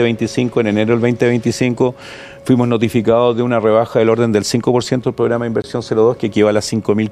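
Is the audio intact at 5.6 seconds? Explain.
No. From 5.62 to 5.64 s there is a block of digital silence: about 20 ms of samples were set to zero, which fits the output buffer not being filled in time. The sound cuts out and back with no fade, and at this length it comes across as a short hole. A waveform shows a flat line with abrupt edges, and a spectrogram shows a blank vertical strip bordered by thin broadband lines.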